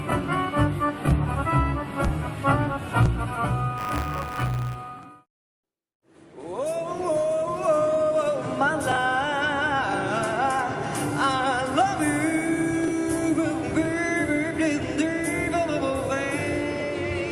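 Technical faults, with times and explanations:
3.77–4.76 s: buffer tearing. Writer and reader slip, so a small slice of each period replays audio around 40 ms old, giving a hard-edged 100 Hz rattle.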